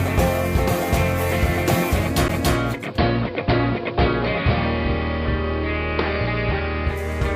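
A CD skip at 2.28 s leaves a tiny tick and a brief mute of around 10 ms in the music. A knock or disc flaw threw the laser onto another turn of the spiral, so playback resumes from a different point in the recording.

Digital radio blending to analogue runs from 2.74 s to 7.09 s. The receiver lost its digital signal and cross-faded over about 248 ms to the station's AM broadcast. The music turns dull, the level holds steady, and hiss sits roughly 30 dB below the music.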